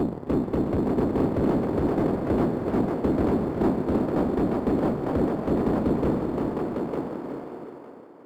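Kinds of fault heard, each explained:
Crude rate conversion: Throughout the clip, samples appear to have been repeated unfiltered, consistent with a 44.1 kHz to 48 kHz change. The periodic error adds inharmonic tones about 35 dB below the sound, heard as a gritty fizz tracking loud and high-frequency content.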